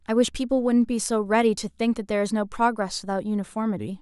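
No technical faults are audible.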